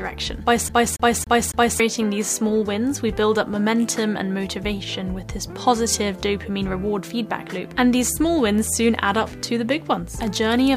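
From 0.69 s to 1.80 s the audio sticks like a CD stuck on one turn. The same slice of about 0.28 s plays four times in a row, with a brief mute at each jump back, giving a fast, perfectly even stutter. That happens when a scratch knocks the laser back a track at the same point on every rotation. Unlike a network dropout or buffer glitch, the repeated segment is identical each time and the rhythm never drifts.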